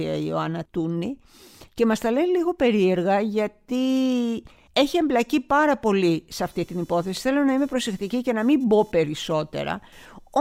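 A speech clip. From 6.42 s, after "εμπλακεί πάρα πολύ σε", computer activity noise buzzes to the end, pulsing around 500 Hz, roughly 35 dB below the speech. Changing processor load disturbs the shared audio ground.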